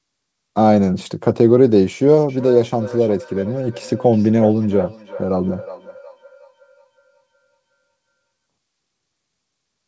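From 2.29 s to 8.14 s the speech is trailed by a thin, ringing copy of itself that returns about every 0.4 s, peaking at about 17 dB below the direct voice, with the band above 8 kHz absent throughout. This is feedback echo between two devices. A second device in the room plays the call back, the first microphone captures it again, and that device's echo canceller cannot remove sound it did not play itself.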